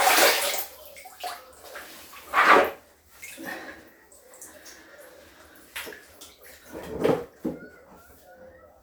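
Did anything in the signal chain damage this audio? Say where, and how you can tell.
Yes: damaged data in the compressed stream, codec stage, 6.80–6.84 s. Corrupt frames desync the decoder, giving a brief glitch; a spectrogram shows a broadband smear, the waveform a short discontinuity.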